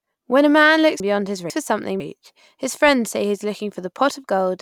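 Just after "a man", from 1.0 to 2.0 s, the speech jumbles before "his friends say he": chunks out of order, a 500 ms chunk arriving one chunk late, leaving three hard joins.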